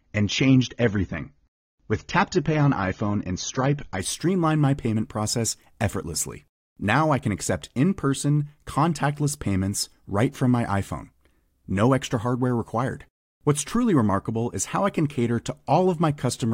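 Speech clip. From 0 to 4.0 s the sound is dull, with nothing above 7 kHz and stronger codec artefacts. This is an adaptive stream starting at a low bitrate, which fits AAC at about 24 kbit/s. It steps up without a gap, likely to 96 kbit/s, just before "streamline my payment process".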